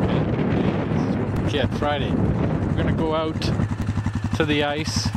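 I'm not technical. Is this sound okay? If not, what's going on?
No. Two brief clicks at 1.36 s and 3.82 s are a repeated buffer: new audio arrived late, so a tiny slice of about 3 ms played twice.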